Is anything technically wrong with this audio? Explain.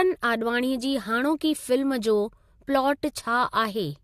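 No, nothing technically wrong turns up anywhere in this speech recording.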